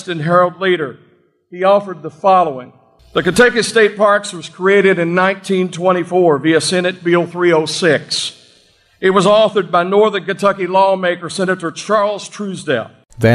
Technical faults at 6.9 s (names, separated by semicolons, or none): none